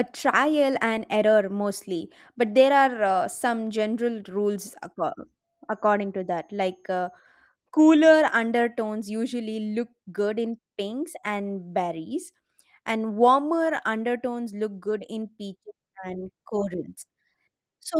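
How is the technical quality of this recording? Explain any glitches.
Nothing stood out as a glitch on listening to this speech recording.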